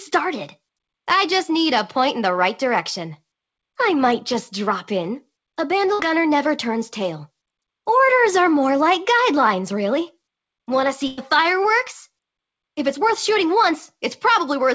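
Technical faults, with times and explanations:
5.94 to 6.01 s and 11.07 to 11.19 s, burst of packet loss: about 50 ms, then about 100 ms, are bridged by a fading smear of the preceding sound, then the audio skips ahead.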